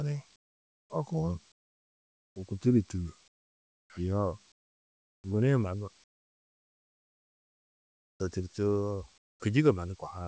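In the pauses at 0.36–0.90 s, 1.52–2.36 s, 3.28–3.90 s, 4.52–5.24 s, 6.04–8.20 s and 9.18–9.40 s, comfort noise replaces the background. The real ambience drops out and a flat, featureless hiss about 25 dB quieter stands in, likely because the sender's voice detector halted transmission and the receiver synthesised filler noise.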